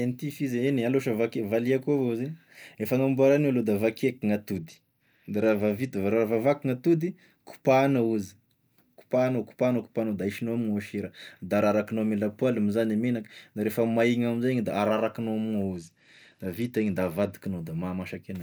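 A Bluetooth SBC bit pool drop hits the speech from 4.55 to 5.99 s and again from 15.74 to 17.33 s. Each time the link's encoder starved itself of bits, a fall that fits a bit pool dropping from 28 to 12, near 96 kbps. The highest sub-bands lose their share and the rest are quantised coarsely, so the treble goes dull and a gritty grain rides on the sound until full quality returns.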